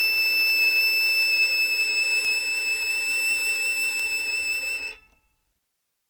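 The music has most likely been through repeated lossy encoding, with MP3 at 128 kbit/s applied around five times over. That generation loss runs from the first moment to the last. Each decode and re-encode quantised the signal again on a shifted frame grid, so the errors piled up. The result is a swirly, hollow quality with smeared transients and blurred attacks, beyond what a single 128 kbit/s pass would leave, and nothing remains above 20.1 kHz.

From 0.50 s to 5.74 s, word clock ticks appear. A receiving device was running on its own clock rather than locking to the incoming digital stream, drifting by a few tens of parts per million. Every time the two clocks slipped past each other, one sample was dropped or repeated. This produces about fifteen sharp ticks of uneven strength at a steady rate, roughly one every 0.4 s.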